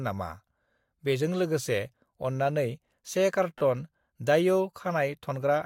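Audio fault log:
3.58–3.60 s, repeated frames: a brief stutter where the same slice of sound plays again, adding 24 ms, which fits three 8 ms blocks being replayed. A waveform shows identical short segments side by side, and a spectrogram shows a repeating pattern.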